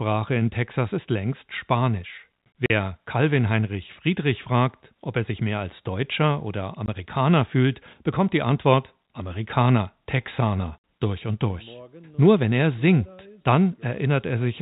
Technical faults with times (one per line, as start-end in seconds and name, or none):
2.66-2.70 packet loss filled with silence
6.86 packet loss filled with silence
10.78-10.84 packet loss filled with silence